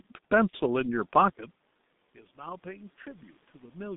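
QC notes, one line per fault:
throughout: G.723.1 codec. The speech passes only between roughly 150 Hz and 3.7 kHz at about 6.3 kbit/s, so it sounds muffled and hoarse; the codec's coarse 30 ms frames and slow voice model smear consonants heavily.
0.50–0.57 s: VoIP packet loss concealed by the speech codec. One 30 ms frame went missing and the decoder filled it by repeating its last pitch and filter at falling gain, giving a brief fading patch that lingers after packets resume.
2.16–3.95 s: automatic gain rising. The input dropped by about 22 dB, and the gain control responded by slowly adding about 5 dB, so speech and room noise swell together over nearly two seconds rather than jumping.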